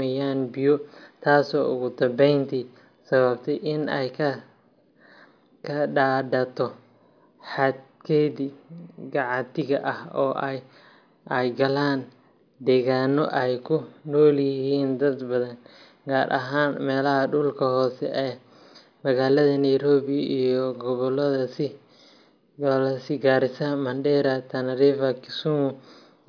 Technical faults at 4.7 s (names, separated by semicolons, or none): none